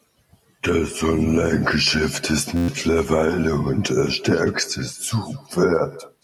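All the way through, the speech is trailed by a faint, thin copy, about 20 dB down and about a fifth of a second late: echo with no canceller, the far end's loudspeaker feeding its microphone. From 2.57 to 2.68 s, a steady buzz at 86.1 Hz replaces about a tenth of a second of speech. This is a system hang loop: one 11.61 ms chunk repeats ten times, which fits a 512-sample buffer cycling while the system froze.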